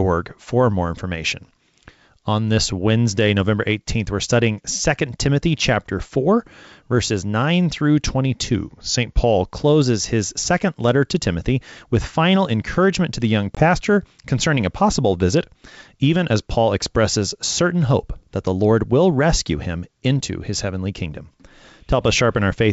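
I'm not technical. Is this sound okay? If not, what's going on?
No. Between 8.54 and 9.46 seconds, the software keeping two clocks in step likely made a drift correction step, changing the playback rate all at once. The speech slows by about 5% and drops almost a semitone, then snaps back to normal.

At 13.55 seconds there is packet loss on an ADPCM call: about 20 milliseconds of sound, probably a single packet, went missing and became a hard silent gap. The decoder then briefly lost track, so the speech just after sounds off before settling by 13.64 seconds.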